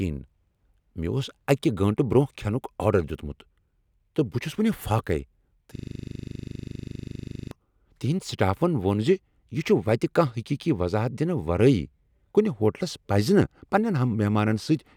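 At 5.76 s the speech locks up in a system hang loop that holds until 7.51 s. Something upstream froze while the audio hardware kept replaying its ring buffer, so one 40 ms slice repeats exactly, around 44 times. At a 25 Hz cycle that's right on the edge between tone and stutter: a gritty, rapid-fire rattle that stops abruptly when the system recovers.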